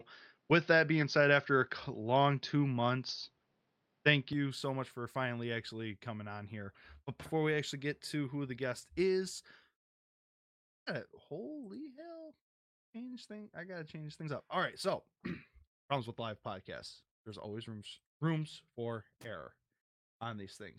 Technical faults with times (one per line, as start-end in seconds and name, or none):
0.00-4.33 input switched to a poorer device
9.87-10.57 call audio freeze
10.85-10.88 skip ahead
11.33-14.08 jitter buffer slow-down
14.21-16.11 jitter buffer speed-up
17.03-20.13 jitter buffer speed-up